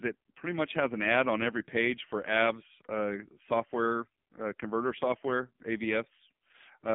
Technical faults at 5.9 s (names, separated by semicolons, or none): AMR narrowband mobile codec